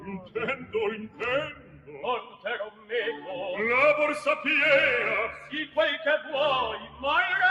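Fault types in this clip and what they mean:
noise suppressor applied to music or sounds: The level keeps pumping and thinning, with sustained sound and decaying tails sinking while sharp attacks punch through, swinging by around 10 dB. A noise suppressor tuned for speech was left on and treats steady content as noise.
sound cut by the noise suppressor: Short stretches dip sharply, by about 8 to 11 dB, at 0.0–0.36, 0.56–0.74, 1.53–2.04, 2.22–2.45, 2.71–2.92, 5.38–5.77 and 6.79–7.03 s, because the suppressor took those passages for noise and pulled them down harder.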